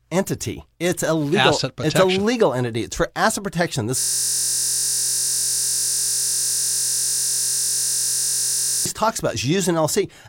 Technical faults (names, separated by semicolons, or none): system hang loop